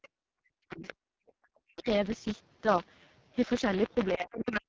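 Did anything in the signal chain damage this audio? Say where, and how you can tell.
Yes. At the driver/buffer stage there's buffer tearing: a steady 100 Hz buzz under the speech the whole way through, which points to a 10 ms buffer period splicing in audio one lap old.

At the codec, AMR wideband (HD Voice) is heavily damaging things, with rough, raspy speech throughout that sounds like the lowest rate, around 6.6 kbit/s.

In call processing, there's the other side's voice leaking through: faint scraps at 0.02 to 0.08 s and 1.27 to 1.32 s, and a clearer stretch at 0.71 to 0.94 s, likely from incomplete echo cancellation.

The speech gets suppressed in double talk, ducking almost to nothing at 0.39 to 0.83 s, 1.59 to 1.88 s and 4.16 s to the end, likely the canceller clamping during overlap.

There's also background gated by the echo canceller: the room sound drops by about 40 dB from 1.11 to 1.27 s while the loudspeaker plays, then comes back.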